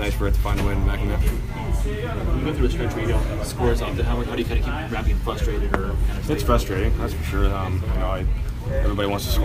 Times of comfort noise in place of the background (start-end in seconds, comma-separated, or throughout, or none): none